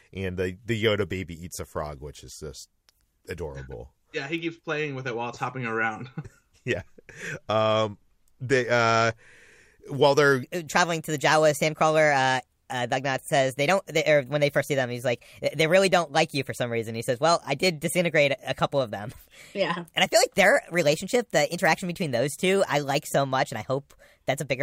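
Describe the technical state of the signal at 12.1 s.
At 12.1 s the signal sits inside a section at the wrong speed, running from 10.43 s to the end of the clip. Playback was likely tied to the wrong clock, so the samples come out 1.25 times faster than they were captured. Because speed and pitch are locked together, the speech is hurried and raised by roughly four semitones, giving it a high, hurried quality that persists from the shift onward.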